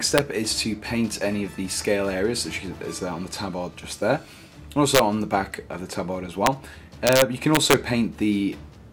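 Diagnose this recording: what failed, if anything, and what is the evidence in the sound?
Integer overflow in a fixed-point gain or sample-format conversion stage: loud peaks at 0.18 s, 4.95 to 4.99 s, 6.46 s and 7.07 to 7.74 s, only about 1 to 2 dB over full scale, wrap to the opposite extreme. The result is violent cracks, far harsher than clipping's flattened tops.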